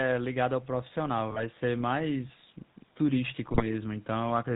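From the start, the speech carries the buzzy, gravelly roughness of the GSM full-rate codec, plainly audible and consistent with a 13 kbps full-rate stream. The codec rebuilds the voice from a vocal-tract filter excited by regularly spaced pulses, keeping only a thinned-out excitation, so fine detail turns coarse. On a spectrogram, energy stops flat at 4 kHz with nothing above it, and harmonics look smeared and grainy rather than cleanly striated.

From 1.30 to 1.44 s, GSM bit errors break through: corrupted filter, pitch or gain values reach the decoder, and the voice squawks, pops and gargles for that stretch. The waveform shows a brief, irregular burst with level jumping frame by frame. On the spectrogram the band below 4 kHz turns blotchy and distorted, with short vertical smears at frame boundaries where the spectral shape suddenly goes wrong.

A longer burst of GSM bit errors follows from 3.46 to 3.74 s, again heard as gargling squawks and pops as damaged decoder parameters bend the spectrum and spike the gain in successive frames. 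In the waveform this is a ragged, uneven cluster of level jumps lasting about a quarter of a second. The spectrogram shows a patch of chaotic, blocky energy replacing the normal harmonic pattern, still capped at 4 kHz.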